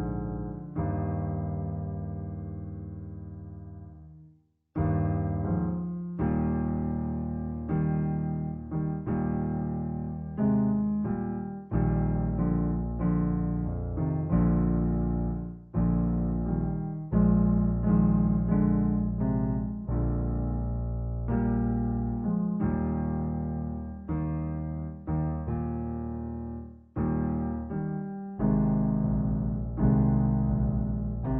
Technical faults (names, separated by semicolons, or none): stereo read as mono